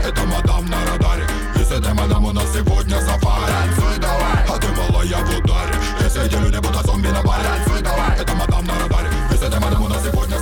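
From 6.04 s to the end at 10.42 s the audio runs about 1.35 times faster than the preceding section while its pitch stays unchanged, a time-stretched section. The pace jumps abruptly at 6.04 s, and the remainder sounds rushed. This is likely the result of software compressing that stretch to fit a shorter length, preserving pitch by discarding short slices of the waveform and splicing the remaining pieces together.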